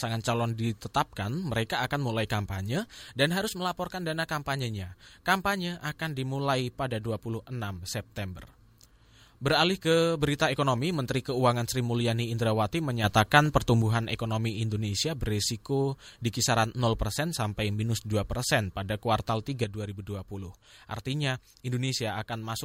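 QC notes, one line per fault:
13.04–13.82 s: sudden gain jump up about 6 dB. Speech and background noise step together with no ramp, unlike a fade, likely from an unsmoothed gain change.
19.64 s to end: sudden gain jump down about 6 dB. Speech and noise floor drop instantly and together, unlike compressor pumping, likely from an unramped gain setting.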